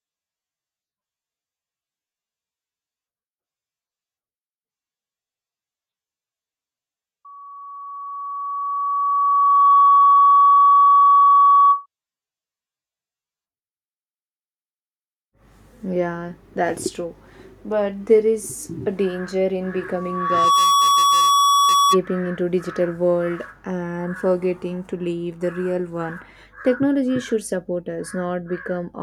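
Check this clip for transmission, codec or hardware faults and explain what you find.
Loudspeaker feedback squeal occurs twice in this speech, from 7.25 to 11.86 s and from 19.95 to 22.00 s, between "is a danger in" and "into digital world and". The microphone picks up the loudspeaker it drives, and at 1.1 kHz the loop gain passes one, so that tone feeds on itself. It swells over about three seconds the first time and in under a second the second time, then rings as a steady whistle roughly 10 dB above the speech.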